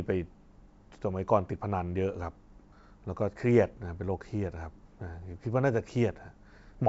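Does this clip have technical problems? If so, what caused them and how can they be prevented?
No, nothing stood out on listening to this speech, which comes through a call connection with the band limit of a G.722 codec, so nothing is heard above 8 kHz.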